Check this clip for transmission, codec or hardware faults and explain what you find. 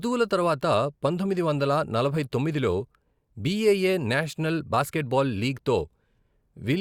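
There's one fault here, a bit error spike at 4.23 s, right before "బాస్కెట్బాల్ లీగ్తో". A single flipped bit knocks one sample out by a power of two, peaking at about -30 dBFS, before it snaps straight back. You hear a lone sharp tick across the whole spectrum, unrelated to the speech.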